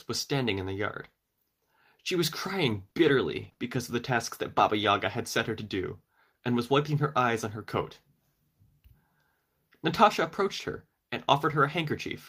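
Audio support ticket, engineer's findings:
Scattered short gaps, 2.69–4.85 s: about three brief hiccups and smears in the speech, the longest roughly 40 ms. Packet loss on the receive path, with the concealer stretching the last sound over each hole. Spectrogram shows short smeared, flattened patches.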